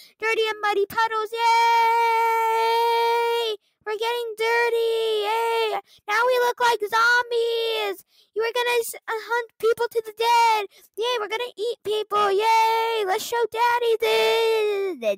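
From 10.71 s to 10.98 s the sound is cut by the noise suppressor. The suppressor mistakes part of the audio for noise. It pulls it down, by about 10 dB at the deepest point. Roughly 150 ms in total sinks, leaving a brief dip.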